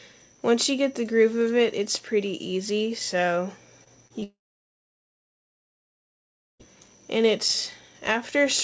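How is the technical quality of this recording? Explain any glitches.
The recording has two types of network fault in quick succession. The audio is band-limited throughout, with nothing above 8 kHz, which fits a G.722 call codec at around 64 kbps.

Short concealed packet loss occurs three times: 3.84 to 3.88 s, 4.08 to 4.12 s, and 4.20 to 4.24 s. Each time about 20 ms of audio failed to arrive, and the receiver extrapolated from the preceding sound. Each gap is heard as a brief smear or wobble.

Long network dropout follows immediately, from 4.24 to 6.66 s. The concealed tail fades quickly, and about 2.25 s of silence follows before the audio resumes with the intervening portion missing. The likely cause is a stall in packet delivery on the network.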